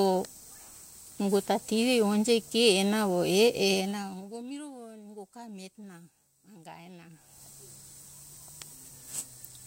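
A speech clip with zipper noise from 3.72 to 4.46 s. It starts right after "e e" and ends before "miro nungo ga miretona". Over that span the level drops by around 20 dB. The drop comes in 2 dB steps, about twenty a second, with no smoothing between them. Each step makes a small click. Together the clicks form a ticking, zipping texture on the speech while the level falls.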